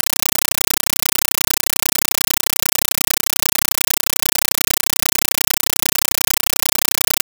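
From start to end, a compressed stream played as audio: undecoded AC-3 data, likely around 384 kb/s, heard as loud static chattering in 8 ms bursts 31.25 times a second instead of the speech.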